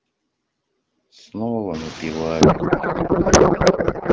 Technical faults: noise suppressor artifacts; codec payload misread

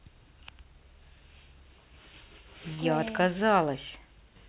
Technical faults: burst of packet loss

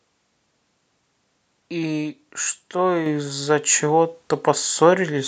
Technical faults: microphone volume stepped up

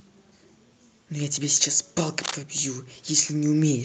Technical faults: cable scratch noise; automatic gain rising

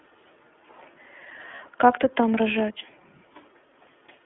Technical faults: iLBC codec; lost iLBC frames

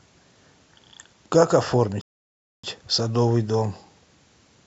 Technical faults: rebuffering stall

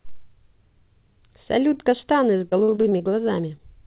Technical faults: repeated packet loss (robotic sound); short concealed packet loss

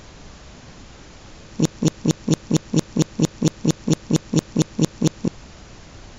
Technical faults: broken-record loop

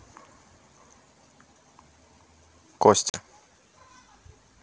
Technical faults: packet loss on an ADPCM call

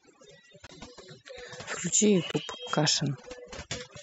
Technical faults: overdone noise removal; corrupt frame decoded

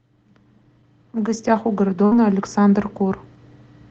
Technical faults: burst of packet loss

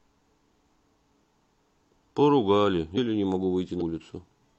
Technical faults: compressed frames skipped

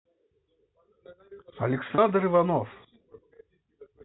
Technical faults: packet loss with pitch repetition

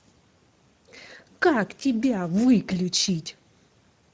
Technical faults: Speex codec

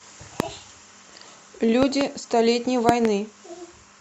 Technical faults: loud pop

